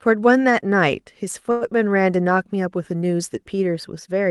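At 1.51 to 1.64 s, a short stall from a late packet holds the speech for about 97 ms while the receiver waits, then resumes without loss, adding that delay. A spectrogram shows frozen, smeared harmonics, above an Opus-coded band ending near 12 kHz.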